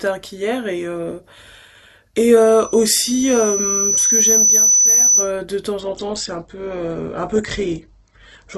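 From 2.37 s to 5.32 s a loudspeaker feedback squeal rises over the speech. The microphone is picking up its own loudspeaker, and at 6 kHz the loop gain tops one, so that single tone feeds itself, swelling over roughly two seconds until it sits a few decibels above the speech. The slow growth at one fixed pitch sets it apart from a steady electrical whine, which arrives at full level and stays there.

At 5.80 s the adaptive stream drops to a lower bitrate and stays there to the end of the clip. The slowed connection forced a leaner encoding, and the sound fits a fall from around 64 kbit/s Opus to roughly 12 kbit/s. The treble is cut away, with nothing above 8.3 kHz, and the speech turns thinner as codec artefacts rise. Unlike a dropout, the quality shift is abrupt but leaves no gap or silence.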